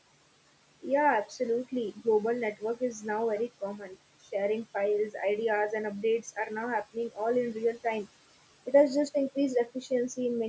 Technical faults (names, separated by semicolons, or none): noise suppressor artifacts; speech cut by the noise suppressor